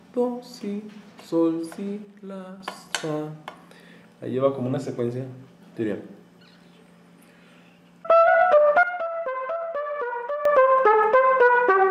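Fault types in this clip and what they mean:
sudden gain jump: Level drops abruptly by about 6 dB from 2.05 to 2.60 s and by about 12 dB from 8.83 to 10.45 s, background noise included, likely an unramped digital gain change. The waveform envelope steps down and back squarely, and the spectrogram darkens evenly across all frequencies.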